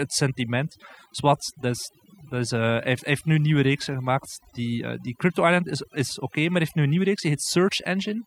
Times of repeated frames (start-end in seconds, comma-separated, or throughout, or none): none